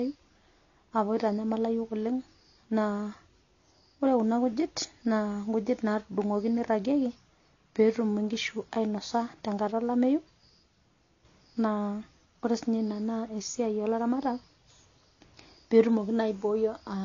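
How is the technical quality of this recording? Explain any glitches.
Quality is limited throughout by transcoding between lossy codecs. Nothing sounds above 7 kHz. Layered artefacts suggest a low-bitrate HE-AAC pass, likely re-encoded as AAC-LC, compounding distortion.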